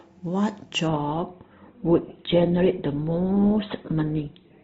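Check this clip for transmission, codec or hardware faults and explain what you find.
One fault here, an adaptive stream at a lower bitrate. From 0.88 s to the end, the sound abruptly thins: nothing above 4.2 kHz, swishy codec artefacts, no gap. The stream dropped to a much lower-bitrate version, which fits Opus going from about 64 to about 12 kbit/s.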